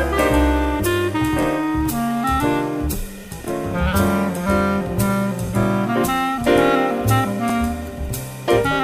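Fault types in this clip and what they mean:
overlapping chunks: each 2-second block begins 23 ms early, so that sliver plays twice at every join, a regular stutter rather than a dropout's gap.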